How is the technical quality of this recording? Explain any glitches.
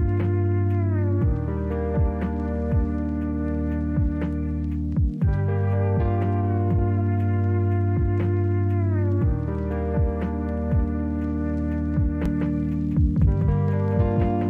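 One fault appears near the end. From 12.26 s to the end, a doubled audio track appears. A second, equally loud copy trails by about a fifth of a second, likely from a slower capture path.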